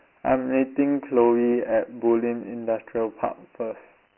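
From start to end the speech carries Dialogic VOX ADPCM damage: a coarse 4-bit coder, which fits a 6,000-sample-per-second VOX file, leaves a heavy gritty hiss riding on each syllable. A spectrogram shows nothing above 3.1 kHz, thin energy below 250 Hz, and grainy noise filling the band wherever speech sits.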